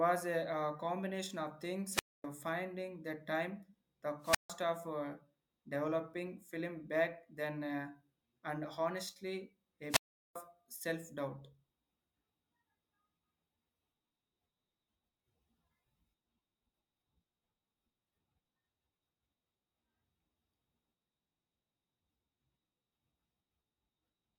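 A speech recording with three wireless microphone squelch dropouts, at 1.88–2.26 s, 4.21–4.52 s and 9.89–10.36 s. Each time the FM radio link fades, a short burst of hiss comes up, then the receiver's squelch shuts the output into near silence for about 250 ms, 150 ms and 390 ms respectively before the voice snaps back. The third gap is the longest.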